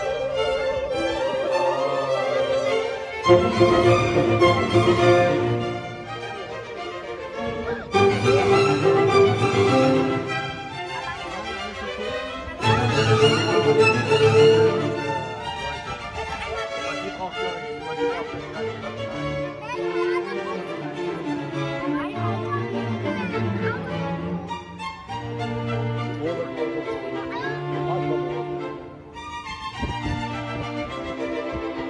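Nothing is technically wrong with this audio.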